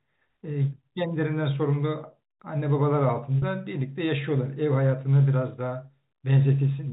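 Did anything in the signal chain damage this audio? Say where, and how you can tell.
Yes, at the network stage: packet loss with pitch repetition from 3.39 to 3.42 s. About 40 ms of sound briefly holds with a buzzy tone, which fits two lost 20 ms packets bridged by repeating the last pitch period, over G.711 telephone coding's 4 kHz band.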